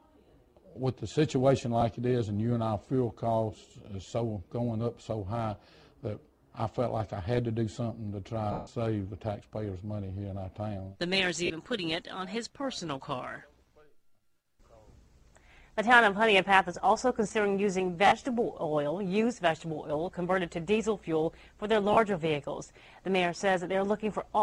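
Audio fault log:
1.81, 8.52–8.67, 11.46–11.50, 18.07–18.12, 21.93–21.97: lost LE Audio frames. Gaps of 10, 150, 40, 50 and 40 ms, consistent with whole 10 ms LC3 frames going missing over the Bluetooth LE Audio link. The decoder fills each gap by reusing the last good spectrum with randomised signs, so tones smear into a noisy wash rather than dropping to silence or stuttering as a repeated chunk. The 150 ms loss runs long enough that this fill fades away toward silence.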